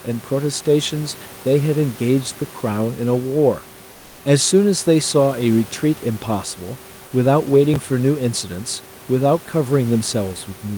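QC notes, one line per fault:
3.91–4.19 s, comfort noise in place of the background: 280 ms of room sound becomes flat, featureless hiss about 2 dB quieter, likely from discontinuous transmission of the kind Opus DTX uses.
7.74–7.76 s, chunks out of order: a 5.33 ms chunk plays about three chunks late, leaving a brief jumbled moment with three hard joins.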